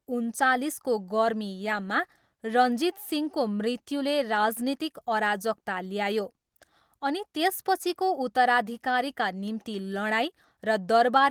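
No technical faults are audible.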